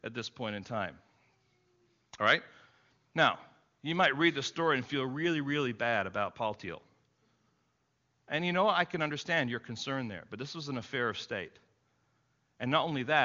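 Speech over a wideband phone codec; no faults heard.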